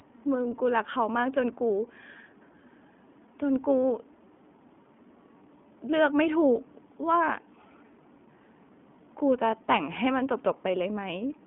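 Speech carrying iLBC codec damage for its whole length: nothing passes above about 3.7 kHz, and each 20 ms frame is coded independently, leaving a plainly rough, synthetic edge, consistent with roughly 15 kbps, that a simple band-limit or clean G.711 telephone line would not add.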